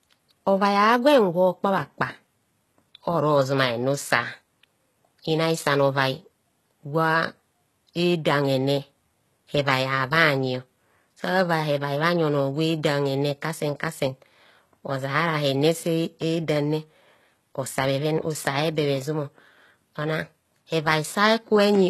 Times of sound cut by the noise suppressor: none

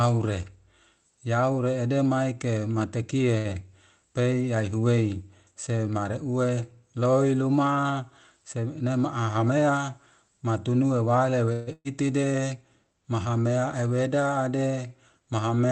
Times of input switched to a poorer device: none

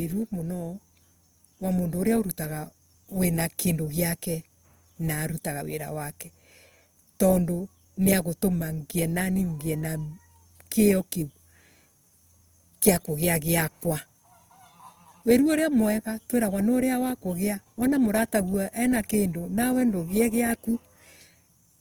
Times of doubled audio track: none

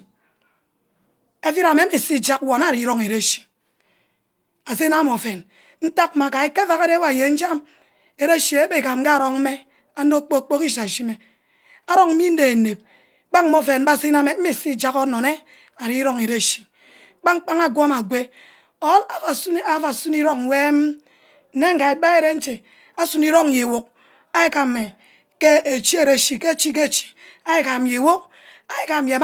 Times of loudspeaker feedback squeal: none

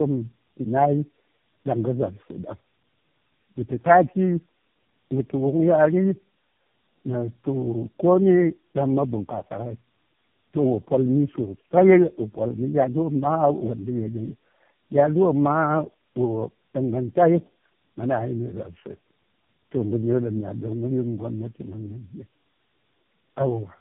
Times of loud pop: none

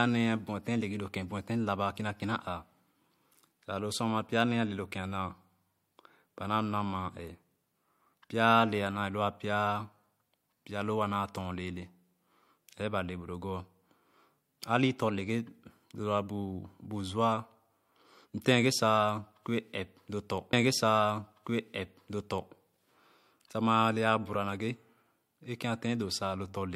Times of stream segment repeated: 20.52-22.53

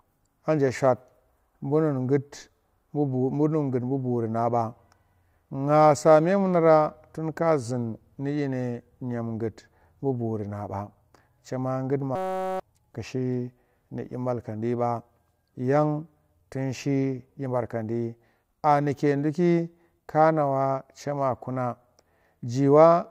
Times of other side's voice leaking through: none

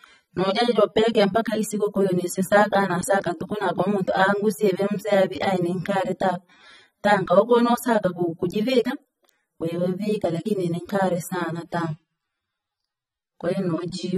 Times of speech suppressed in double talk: none

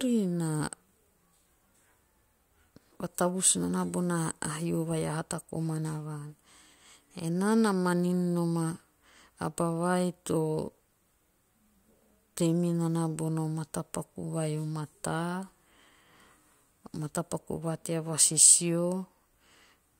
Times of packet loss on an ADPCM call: none

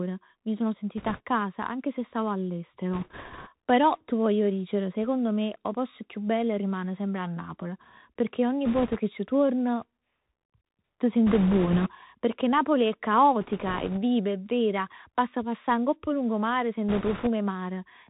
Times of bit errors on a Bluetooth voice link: 0.97-1.21, 2.93-3.49, 8.65-8.97, 11.27-11.91, 13.41-13.99, 16.89-17.28

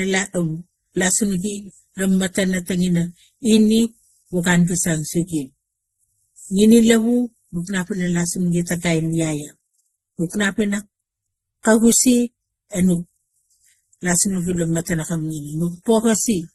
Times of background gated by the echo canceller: none

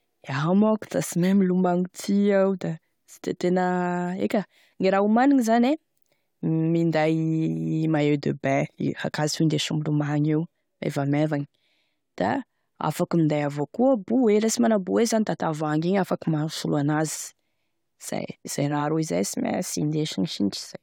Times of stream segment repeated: none

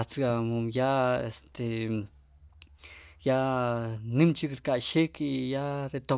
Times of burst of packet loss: none

